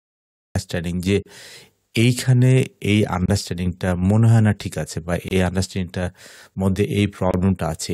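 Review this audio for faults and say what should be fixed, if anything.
The audio opens with a cut-off start. The first 0.55 s is digital silence, and at 0.55 s sound begins abruptly, already in the middle of an event. There is no attack and no fade-in. The capture or stream began late, so whatever was sounding before that point is lost. The jump from silence to sound is hard-edged. To prevent it, start recording before the source begins and keep a short lead-in.

There are four gaps at joins of encoded pieces. They fall at 1.22 to 1.26 s, 3.26 to 3.28 s, 5.28 to 5.31 s and 7.31 to 7.34 s. The first lasts about 33 ms and the others about 27 ms each. They repeat every 2.0 s. That regular spacing means the audio was encoded as separate 2-second pieces and joined untrimmed. Each piece keeps its encoder's start delay and its padded last frame, so brief silence opens in continuous sound. The sound then resumes where it stopped. 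To prevent it, trim encoder delay and padding at each join, or encode the stream as one piece.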